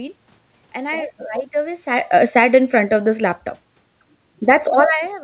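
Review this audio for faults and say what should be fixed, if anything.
Automatic gain falling from 1.86 s to 3.47 s: the gain control found the input too loud, or its background noise too strong, and pulled its gain down by about 3 dB, so voice and room noise sink together. Prevent it by reducing the input level at source so the AGC never sees overload.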